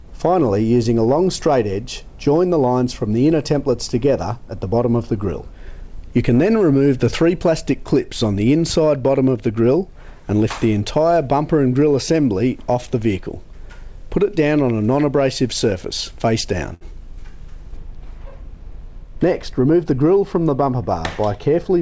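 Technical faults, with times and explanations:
16.74 to 16.83 s, short stall from a late packet: a packet arrived late and the jitter buffer ran dry, so the receiver held the last sound for about 71 ms, then resumed where it stopped. Nothing is lost, unlike a dropout; one sound is simply drawn out, with a faint buzz or dip.
17.77 to 21.81 s, de-emphasis applied wrongly: a treble cut meant to undo pre-emphasis was applied where none existed or applied twice, tilting the response smoothly downward to about 11 dB lower at 10 kHz than at 1 kHz. The gradual slope, not a sharp cutoff like the call codec's limit at 8 kHz, gives the muffled, dull quality.
18.79 to 19.93 s, jitter buffer speed-up: the buffer held more audio than its target, so the receiver trimmed short pitch-period pieces repeatedly, removing roughly 70 ms and running the sound about 6% fast. Pitch stays unchanged, which separates this from a resampling error, but the passage sounds hurried.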